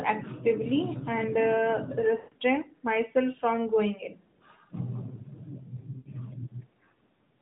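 At 2.18 s the speech goes drawn out and fades toward silence until 2.34 s, about 140 ms, which fits seven lost 20 ms frames. It happens again from 5.98 to 6.10 s, 80 ms. These are lost AMR speech frames: the decoder kept repeating the last good frame's settings with falling gain.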